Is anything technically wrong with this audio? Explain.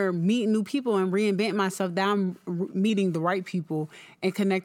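Yes. From 2.9 s, right after "reinventing myself that I'm", the speech drops about 95 cents and slows 5.3% until the end, a drift correction step, likely from clock-matching software slowing playback to refill its buffer.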